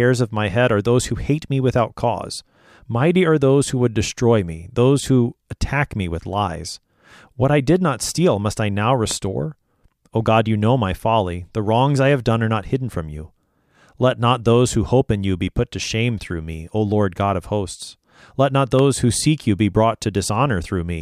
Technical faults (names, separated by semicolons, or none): loud pop